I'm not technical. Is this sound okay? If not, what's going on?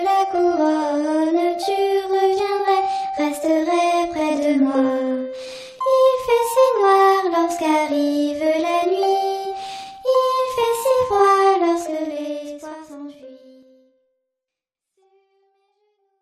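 Yes, the sound is technically sound throughout, with the only change being a deliberate, gentle smooth fade that lowers the level over roughly the last four or five seconds, ending at 16.2 seconds.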